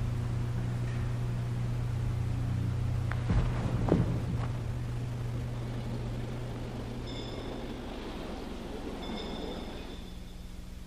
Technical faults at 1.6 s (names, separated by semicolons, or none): none